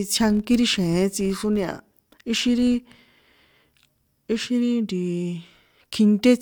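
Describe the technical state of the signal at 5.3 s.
At 5.3 s the speech signal runs intact, with no audible dropout, distortion, clipping or other technical fault at that point.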